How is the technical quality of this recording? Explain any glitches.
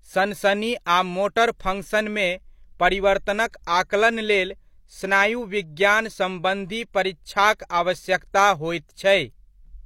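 The speech carries one codec glitch, a pre-echo. At 3.51 to 3.54 s, just before "आकलन लेल स्नायु विज्ञान", a brief hiss runs ahead of the onset for about 23 ms. The codec spread its block noise back into the quiet gap. The attack sounds smeared.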